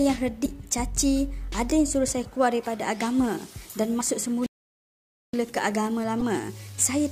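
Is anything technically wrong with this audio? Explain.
Yes, there are two kinds of fault.

Damaged data in a compressed stream occurs at 0.42–0.46 s, 3.97–4.01 s and 6.2 s. Corrupted bytes there make the decoder misread frames, lose sync and hunt for the next header, so each spot is a short chirp or blip.

A playback stall runs from 4.46 to 5.34 s. The player likely ran short of data or had its thread blocked, so output stopped for about 0.87 s. The sound cuts out in mid-flow and resumes after that silent gap.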